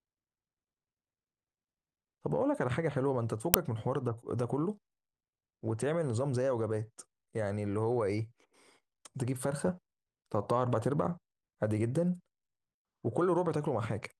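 A speech recording with an uninitialised buffer fault at 3.54 s. A loud crack lasting about 2.67 ms plays where leftover memory was output before audio was written, which fits a 128-sample buffer.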